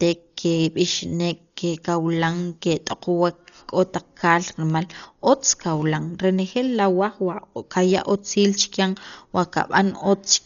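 Across the speech, heavy Dolby Digital compression is the likely cause: a bitrate fitting about 40 kbps narrows the band and leaves many frequency lines filled with dither noise. Nothing remains above 6.9 kHz, so the sound is dull, with rough, fluttering noise around tones.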